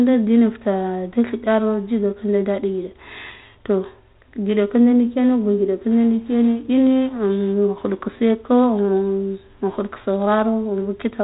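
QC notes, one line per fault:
The speech comes over a 32 kbit/s G.726 ADPCM telephone path that is working normally, confined to the band below 4 kHz, with only the light coding trace expected at that rate.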